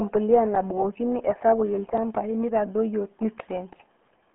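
From start to finish the speech carries the sound of the RealAudio 14.4 codec, the RealAudio 1 low-rate speech coder. Nothing passes above about 3.8 kHz, and the remaining band sits roughly between 200 Hz and 3.4 kHz, like a telephone line. Coding damage is heavy: the voice is muffled and gargly, with a smeared, bubbling texture. This degree of loss fits an 8 kbit/s dial-up-era stream.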